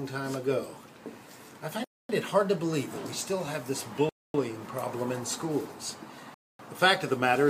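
Gaps between chunks occur at 1.84, 4.09 and 6.34 s. Playback halts for 250 ms after each 2 s chunk, leaving silent holes without losing any sound.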